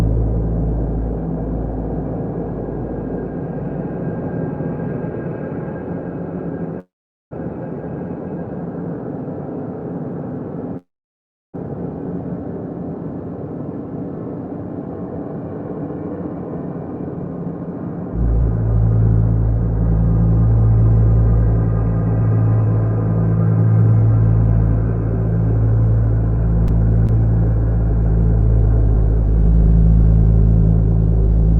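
At 6.79 to 7.33 s and again at 10.77 to 11.56 s there is a call audio freeze. The last sound carries on as a brief decaying buzz and then drops to silence, for about 0.44 s and 0.69 s respectively. Afterwards the audio resumes exactly where it stopped. The likely cause is delayed packets draining the jitter buffer. Each freeze inserts roughly 0.52 s and 0.77 s of extra delay without losing content. On a waveform the envelope tails off to a flat line. On a spectrogram a smeared harmonic tail fades into a blank column.

From 15.18 to 20.05 s, and again from 22.22 to 24.87 s, a jitter buffer speed-up makes the sound run faster at unchanged pitch, at about 107% and then 104% speed, the first stretch sounding hurried. The buffer had built up surplus delay, so the receiver trimmed pitch-period-sized pieces repeatedly. This removed around 0.4 s in the first stretch and 0.1 s in the second. On a spectrogram the harmonics keep their spacing while events arrive compressed in time.

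At 27.07 to 27.11 s a skip ahead drops roughly half a second of audio. The two sides are spliced with only a tiny fill, so playback lurches forward. A waveform shows an abrupt change of envelope at the join. A spectrogram shows a hard vertical seam where unrelated patterns meet.

From 27.91 to 31.44 s a jitter buffer slow-down stretches the sound to about 98% speed at the same pitch. Repeated pitch periods and pause fragments add about 68 ms to rebuild the reserve. Sustained portions are slightly drawn out. A spectrogram shows marginally elongated harmonic stretches, all of it under the call codec's upper limit of about 12 kHz.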